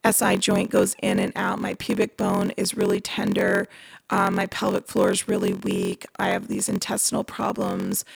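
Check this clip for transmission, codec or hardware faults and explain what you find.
There is one fault, and it runs through the whole speech clip: a block size mismatch (padded). One stage hands over shorter blocks than the next stage reads. Each read is topped up with zeros, which fits a 1024-sample block. A short silent gap lands in every block. These gaps repeat at 43.1 Hz, so a steady buzz sits under the speech. The speech also drags, running at 0.938 of normal speed, while the timbre stays.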